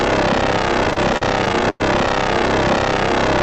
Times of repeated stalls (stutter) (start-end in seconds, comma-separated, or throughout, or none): 0.85-1.82